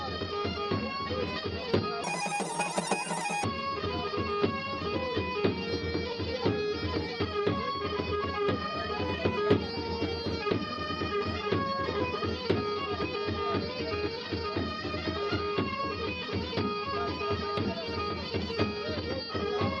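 Audio read two samples at a time (double speed) affects the audio from 2.04 to 3.44 s. The reader treats each pair of samples as a single frame, so the passage runs twice as fast and an octave (12 semitones) higher.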